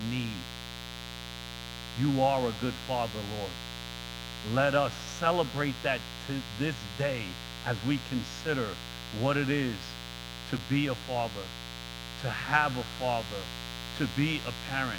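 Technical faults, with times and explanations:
Throughout: mains buzz. A steady, raspy buzz sits under the speech, fairly loud at about 10 dB below it. Sharp switching spikes twice per 60 Hz cycle, from a dimmer, rectifier or missing shield, spread harmonics of 60 Hz well up into the kilohertz range.
10.57–10.59 s: chunks out of order. Between "what it is to" and "be a father" there is a brief jumbled moment. An 11.61 ms chunk plays one chunk late, after the one meant to follow it, leaving three hard joins.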